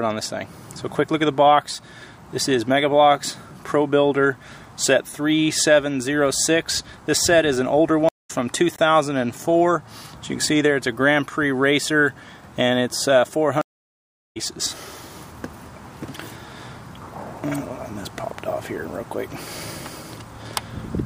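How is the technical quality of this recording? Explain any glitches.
The recording has three glitches: two stream reconnects and one block of digital silence.

Stream reconnect, 8.09–8.31 s and 13.61–14.37 s: the connection dropped, the player went silent, reconnected and started a fresh decoder mid-stream. The silences last 177 ms and 739 ms. The audio then fades back in at a later point, skipping roughly 0.2 s and 0.7 s of material.

Block of digital silence, 8.76 s: a 21 ms run of zeros replaces the audio, likely because the output buffer was not filled in time. The length fits a 1024-sample buffer at 48 kHz. The sound cuts out and returns without any fade, leaving a short hole.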